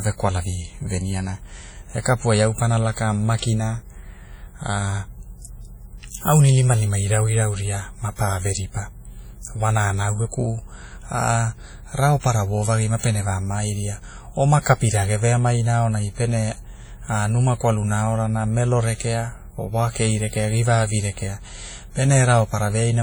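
Throughout the speech, the sound rings and washes, with a hiss that rises and falls with the signal and heavy smearing around each syllable, most likely WMA compression, and heavy damage that fits a low bitrate of about 32 kbps from an early WMA encoder. Long transform blocks spread quantisation noise over tens of milliseconds, and weak components are zeroed. A spectrogram shows blurred onsets, patchy gaps in quiet regions, and content extending to about 20.1 kHz.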